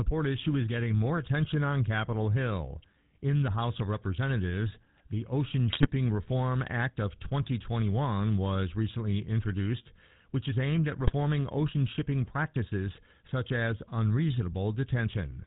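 The whole clip carries plainly audible GSM full-rate codec sound, which fits that codec's 13 kbps. It models the vocal tract and drives it with a sparse pulse train, so speech comes out buzzy and gravelly, with nothing above 4 kHz.

Then come two bursts of GSM bit errors, where corrupted filter, pitch or gain values reached the decoder and the speech breaks up into squawks, pops or gargling. The first runs from 5.70 to 5.91 s, which fits roughly ten damaged 20 ms frames, with a denser error rate. The second, from 10.99 to 11.13 s between "which is aimed at" and "ocean shipping practices such", fits about six frames.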